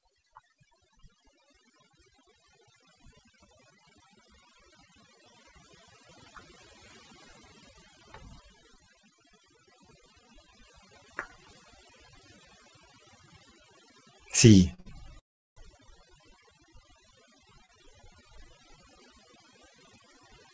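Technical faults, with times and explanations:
Throughout: overdone noise removal. Aggressive denoising pulls individual frequency bands down whenever they sit near the noise estimate, so the background drops with twinkling specks and quiet speech detail vanishes. A spectrogram shows scattered isolated dots over black background and ragged, patchy harmonics, all below the 8 kHz ceiling of the G.722 call path.
14.74 s, 14.80 s and 17.66 s: short stall from a late packet. Each time a packet arrived late, the receiver stretched the last sound for about 44, 50 and 32 ms, then resumed where it left off, so a sound is briefly held with a slight buzz or dip. The waveform shows a repeated, slightly flattened cycle and the spectrogram a short smeared band.
15.19 to 15.58 s: call audio freeze. The audio halts for about 0.39 s, briefly carrying the last sound on before dropping into about 0.36 s of silence, then picks up exactly where it stopped, with nothing lost. 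The likely cause is held-up packets emptying the jitter buffer. On the waveform it appears as a flat gap, and on the spectrogram as a blank vertical strip.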